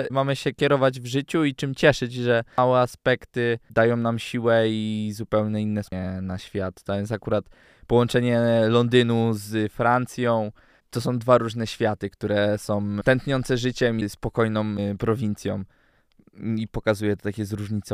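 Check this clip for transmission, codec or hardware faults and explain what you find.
Two faults of one kind turn up in this speech recording. Damaged data in a compressed stream occurs at 2.58 s, after "i czym cieszyć że" and before "aspekty dają nam siłę", and again at 5.92 s, after "siłę i zupełnie inne" and before "na świat". Corrupted bytes in the stream leave the decoder unable to parse those frames, so it loses sync and hunts for the next valid header. Each event is heard as a brief chirp or blip.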